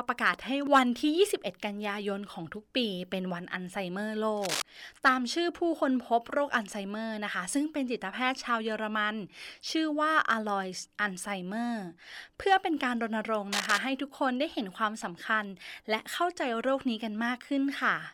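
A worn cable or connector was likely moving, causing cable scratch noise: dense, uneven scratchy bursts at 4.37–4.62 s and 13.52–13.78 s, the second as loud as the speech.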